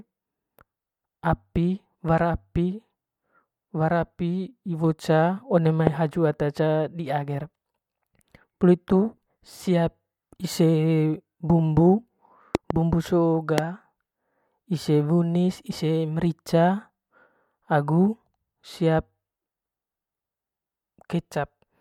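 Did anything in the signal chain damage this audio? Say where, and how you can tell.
Yes. Loud pops, about 15 to 20 dB above the speech, hit at 5.87–5.89 s, 12.55–12.73 s (a double pop) and 13.58–13.60 s, likely from voltage spikes in the analogue wiring.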